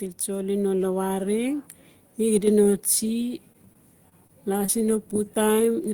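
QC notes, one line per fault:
0.25–1.71 s, automatic gain rising: The level climbs by about 5 dB over roughly one and a half seconds. The gain control judged the input too quiet and turned itself up slowly. The voice and the background noise swell together.
2.41–2.47 s, one channel drops out: For about 60 ms the level dips abruptly by about 6 dB, then recovers. This is likely one stereo channel going silent. In the mono sum, the content shared by both channels then halves, and anything unique to that side vanishes.
3.52–4.70 s, repeated packet loss (robotic sound): Repeated short holes chop the speech here, the longest about 22 ms. Each hole is patched by extending the previous sound, about 120 ms of fill in total. The stacked repeats give a choppy, robotic texture.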